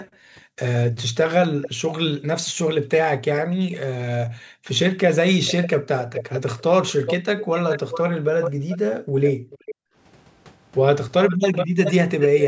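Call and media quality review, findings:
Background gated by the echo canceller: the canceller clamps the microphone while far-end audio plays, so room sound drops by about 40 dB at 0.04–0.57, 2.41–2.91, 4.27–4.67 and 8.51–9.96 s, then recovers.

Echo leak: far-end canceller likely missing loudspeaker pickup. A delayed copy of the speech returns about 0.42–0.44 s late at 1.62–1.69, 5.45–9.75 and 11.23–12.44 s. It sits about 10 dB down, rising to about 5 dB down in the last stretch.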